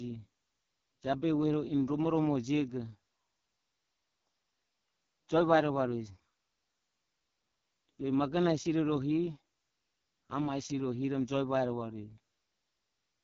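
AMR wideband (HD Voice) codec damage runs through the whole clip, from start to finish. The speech has the rough, raspy grain of this codec's lowest mode, which fits a rate of about 6.6 kbit/s. At that rate the pulse-driven vocal tract model has too few bits to follow the voice closely. The top band is filled with shaped noise rather than real detail, and nothing is heard above about 7.1 kHz.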